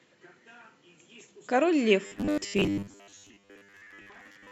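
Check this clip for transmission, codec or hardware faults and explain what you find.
One fault is present. From 2.07 s to the end of the clip, the speech turns into robotic sound from repeated short buffers. The voice becomes a rigid, metallic buzz at 100 Hz. It still loosely tracks the words. The likely cause is audio arriving too rarely, so the software loops the last 10 ms of sound to fill the gaps. That loop length sets the fixed 100 Hz pitch. Most of this stretch is repeated material, and the real audio in between is lost.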